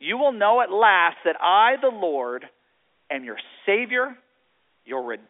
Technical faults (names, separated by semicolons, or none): none